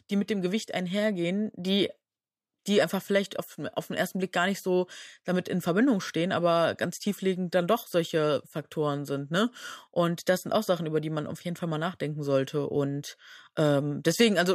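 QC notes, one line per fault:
No fault found.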